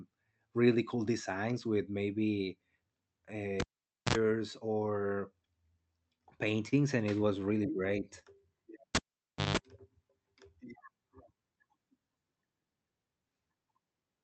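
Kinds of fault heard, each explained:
Cable pulled and plugged in: A live connection is broken and remade, so the speech cuts out with a pop, stays near silent, picks up mains buzz while only the plug tip makes contact, then returns with a second pop. This happens twice: from 3.60 to 4.15 s, with about 0.50 s unplugged and a 61 ms buzz at 60 Hz, and from 8.95 to 9.57 s, with about 0.57 s unplugged and a 163 ms buzz at 50 Hz.
Repeated stalls (stutter): The playout buffer ran dry several times in quick succession, and each time the receiver stretched the last bit of speech until fresh audio arrived. Between 5.93 and 6.74 s, just before "and it was", there are four short hitches totalling 68 ms of filled-in sound, the longest 34 ms. No speech is lost, but the delivery drags and catches through that stretch.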